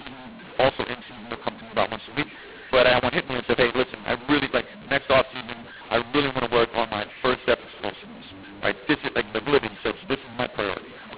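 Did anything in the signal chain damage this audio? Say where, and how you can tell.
Yes, at the codec stage. The clip is G.711 telephone speech encoded as A-law but decoded as mu-law, so the two laws got mixed up across the whole clip. You hear it as harsh, gritty distortion on every syllable, and the gaps between phrases fill with noise instead of going quiet. The two laws map their 8-bit codes to levels differently, so loud and soft samples land at the wrong amplitudes and near-silent codes get lifted well above zero.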